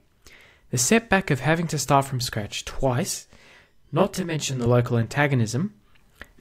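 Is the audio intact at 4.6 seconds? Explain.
No. Channel delay (comb filtering) runs from 3.20 to 4.66 s. One channel lags about 20 ms, and summing carves evenly spaced notches from around 20 Hz, making the speech sound rough or slightly doubled.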